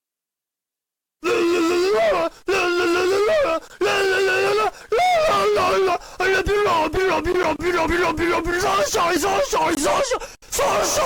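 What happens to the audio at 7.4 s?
At 7.43 s a block of digital silence drops in: about 10 ms of samples are zeroed, as when an output buffer isn't filled in time. The signal cuts to zero and back with no fade, so the gap is heard as a tick or dip.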